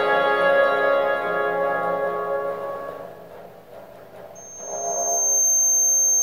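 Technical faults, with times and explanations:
4.35 to 6.23 s, loudspeaker feedback squeal: a single tone at 6.4 kHz swells over about a second and ends up roughly 5 dB above the sound. The microphone is hearing its own loudspeaker, and at that frequency the loop gain tops one. A spectrogram shows one bright horizontal line that thickens, and the waveform envelope grows.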